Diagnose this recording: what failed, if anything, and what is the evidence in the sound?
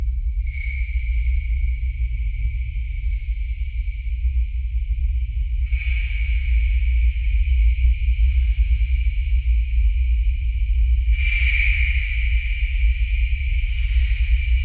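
Nothing failed; no faults heard.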